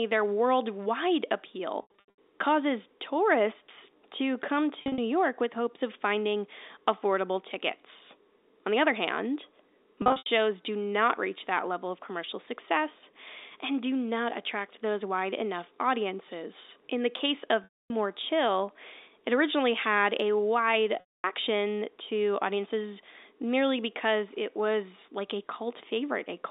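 At 1.82 to 2.18 s, after "their worldwide" and before "causes tourists to come", packet loss with pitch repetition bridges about 280 ms of missing audio scattered over 360 ms, which fits 20 ms packets. Further losses follow at 4.82 to 4.98 s, 10.02 to 10.26 s, 17.64 to 17.90 s after "the case", and 21.00 to 21.24 s after "originally had a wide". The receiver replays the last pitch period through each lost stretch, so the sound holds briefly as a buzzy, sustained tone and then fades. Runs reach 80 ms at most in the first and third losses, long enough for the fade to sink toward silence before the speech cross-fades back in. A plain dropout would instead cut straight to silence, with no held pitch. Throughout, the narrow telephone band of G.711 A-law coding can be heard, at roughly 300 Hz to 3.7 kHz.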